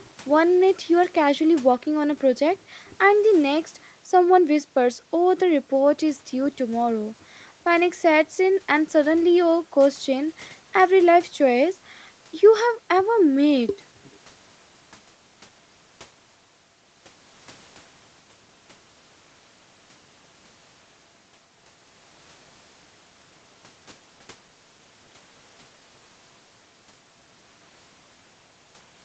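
No technical faults can be heard in this speech. It carries the sound of a normal call path, with the usual coding of the Opus codec and nothing above about 8 kHz.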